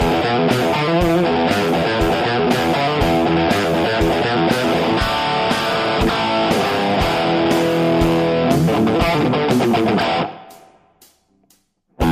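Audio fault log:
Nothing stood out on listening.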